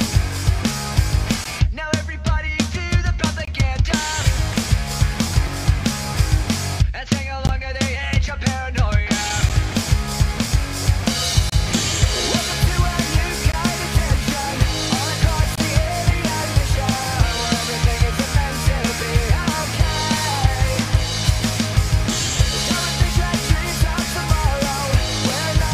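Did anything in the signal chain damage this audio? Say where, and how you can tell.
Yes. The damage comes from gaps between stream segments, at the playback stage. Hard-edged silent holes of 4 to 27 ms fall at 1.44, 3.45–3.48, 5.47, 7.47, 9.49, 11.50–11.52, 13.52 and 15.56–15.58 s, about every 2 s. Mismatched timestamps between 2 s segments leave silence-filled holes, though no audio is lost.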